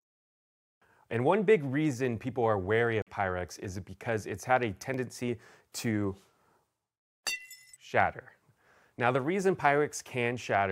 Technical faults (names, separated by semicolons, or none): corrupt frame muted; block of digital silence